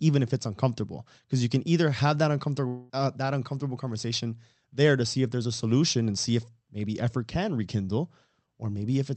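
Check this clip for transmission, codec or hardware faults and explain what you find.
There is one transmission fault in this speech clip: a long network dropout from 2.67 to 2.91 s, between "can either have that" and "uh that uncomfortable conversation." About 0.22 s of audio never arrived. The gap is filled with a fading buzz or hiss instead of silence, likely the receiver extending the last sound. On a spectrogram, that stretch appears as smeared, static harmonics without formant movement. The waveform shows a decaying, repetitive envelope before speech resumes with the lost part skipped. The call codec's band limit is also visible, with energy ending at 8 kHz.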